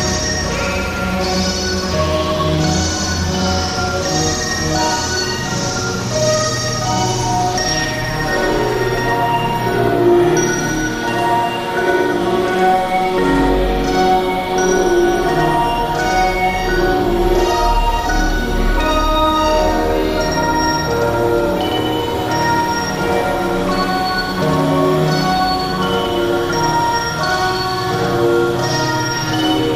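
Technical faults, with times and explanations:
Throughout, doubled audio track: a second full-band copy of the sound trails the original by roughly a tenth of a second at about the same level, with no decay or room colour, likely because the signal is captured twice through paths of different delay.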